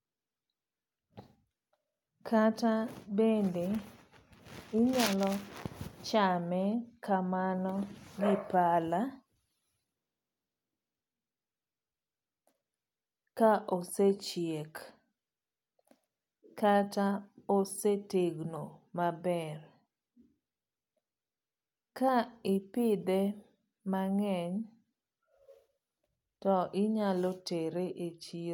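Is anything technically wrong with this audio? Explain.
No, nothing in this speech recording stood out as a technical problem on listening.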